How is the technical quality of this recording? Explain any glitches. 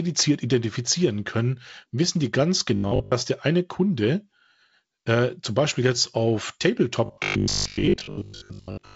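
The recording has two glitches of the same kind. It is band-limited to about 7.7 kHz, with the light hiss of wideband telephone coding.

Robotic sound from repeated short buffers appears from 2.76 to 3.12 s, and again from 7.06 s to 8.96 s. The speech turns into a stiff, metallic buzz at 50 Hz. It still roughly tracks the words. The likely cause is audio arriving too slowly. The software replays a 20 ms slice to fill each gap, and most of the real audio is lost.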